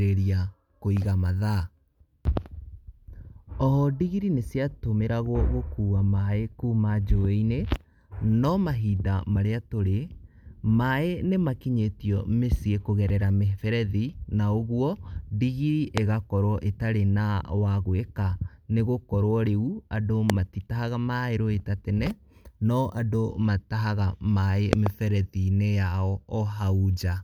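Speech with three loud pops, sharp spikes far above the voice at 15.98–16.00 s, 20.30–20.32 s, and a double pop at 24.73–24.89 s, likely from electrical switching or static.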